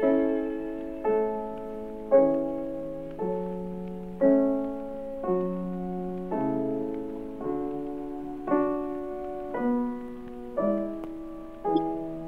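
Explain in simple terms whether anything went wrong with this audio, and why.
Two short glitches show up, both a corrupt frame decoded. A compressed chunk of the audio had some of its data scrambled, and the player decoded it anyway, so for a split second sound lands at the wrong pitches. The first, at 7.16 s, is a faint glitch spanning what sounds like a couple of frames. The second, from 11.75 to 11.78 s, is a single damaged frame and pops out as a much louder glitch.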